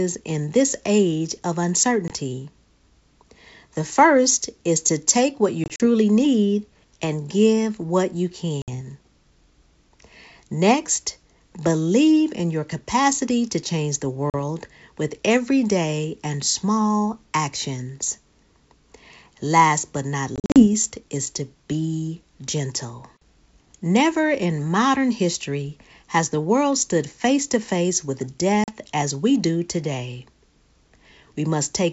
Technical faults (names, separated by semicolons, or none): packet loss on an ADPCM call